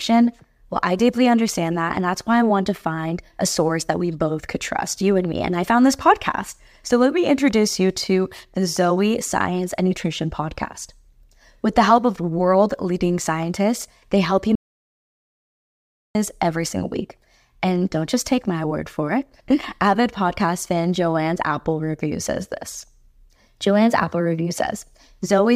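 A speech clip with an audio dropout to silence: right after "scientists they help you" at 14.55 s the sound just stops dead and stays silent, no room tone at all, until it comes back at 16.15 s on "every single week". That's about 1.6 s of speech simply gone. It's likely the input was lost for a moment, say a loose connection, a link hiccup or an accidental mute, while the recorder kept writing silence.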